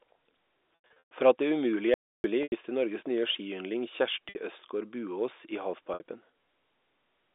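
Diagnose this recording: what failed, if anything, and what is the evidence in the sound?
Network stage, packet loss with pitch repetition: buzzy held pitch over 0.75–1.11 s (longest gap 120 ms), 2.43 s, 4.29 s after "nye skiyndling", and 5.94 s, with the receiver looping the last pitch period to cover lost packets.

Audio dropout to silence at 1.94–2.24 s, right after "at det umulige": about 300 ms of dead silence with no room tone, likely an input link or mute dropping out upstream.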